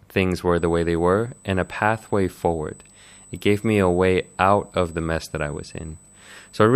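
From about 0.57 s, right after "things were", a thin, steady high whine at 8 kHz comes in and sits under the speech all the way to the end, roughly 30 dB below it. That's USB whine. The USB bus pulls current in bursts every 125 microsecond microframe, which is exactly an 8 kHz rate. That ripple sneaks into the audio through shared power or ground and shows up as this fixed-pitch tone.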